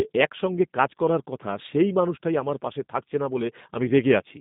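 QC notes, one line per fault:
throughout, G.729 codec: the speech sits in a narrow phone band, roughly 150 Hz to 3.7 kHz. The slightly rough, synthetic texture comes from rebuilding it from a vocal tract model and sparse pulses, which fits an 8 kbit/s G.729 stream. The damage is plainly audible.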